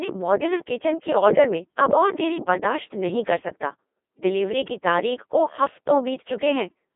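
Speech, run throughout through a Codec 2 vocoder, heavily damaged. The voice is rebuilt from sine waves driven by pitch, voicing and envelope, so it sounds robotic and buzzy. The density fits a 2.4 kbit/s mode, in a 200 Hz to 3.5 kHz band with nothing above 3.8 kHz.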